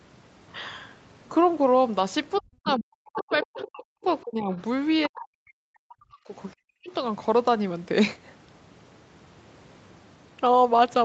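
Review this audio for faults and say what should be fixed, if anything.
Speech suppressed in double talk, at 2.41–3.87, 4.22–4.52, 5.07–6.35 and 6.52–6.92 s: the speech dips by up to about 40 dB, likely because the echo canceller ducked everything while both sides overlapped.

Other side's voice leaking through, at 2.65–2.74 and 3.13–3.62 s: a second, fainter voice, about 10 to 15 dB below the speech, comes through, likely loudspeaker echo the canceller failed to remove.

To prevent both, have the talker use a headset, or give the echo canceller stronger double-talk detection and echo path modelling so it removes the echo without suppressing the near talker.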